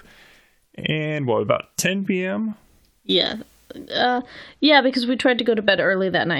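De-emphasis applied wrongly, from 4.18 s to the end of the clip at 6.40 s: a treble-cutting filter meant to reverse pre-emphasis has been applied to speech that never had that boost, or the correction has been applied a second time. The response rolls off smoothly above the midrange, reaching about 14 dB down at 10 kHz relative to 1 kHz, so the final stretch turns noticeably dull and muffled, losing crispness in sibilants and consonants.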